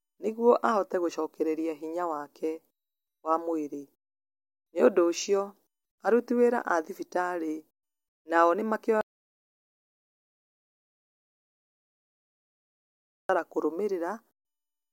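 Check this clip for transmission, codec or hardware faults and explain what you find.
One fault shows up: an audio dropout to silence from 9.01 s to 13.29 s, right after "nao nĩ". The speech stops abruptly and about 4.3 s of silence follows, with no room tone at all, before the sound returns mid-flow. The likely cause is a lost input, such as a disconnected device or a mute, while recording continued writing silence. Unlike a noise gate or packet-loss concealment, nothing fades or is filled in. Whatever was said in that gap is gone.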